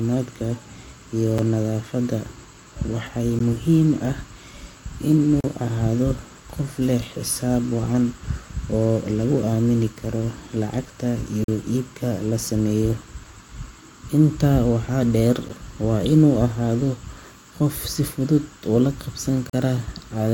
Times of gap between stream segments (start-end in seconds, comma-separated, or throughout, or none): 1.38, 3.39, 5.40-5.44, 11.44-11.48, 13.48, 15.49, 19.50-19.53